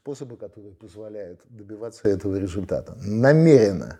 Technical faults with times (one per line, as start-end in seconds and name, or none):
2.05-3.99 sudden gain jump